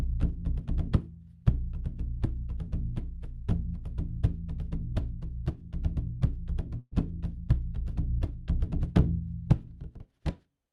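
At 6.79 s there is a burst of packet loss lasting until about 6.93 s. Several packets in a row never arrived in time to be played. The receiver filled about 120 ms by stretching the last sound it had, turning it down as the gap went on. It then drops to silence for about 30 ms. The sound resumes further on, with about 120 ms of the original audio missing.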